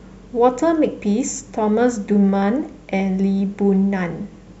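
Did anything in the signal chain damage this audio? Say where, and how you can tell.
No, nothing along the chain left a mark on this speech that I can hear, so there's no damaged stage to point to.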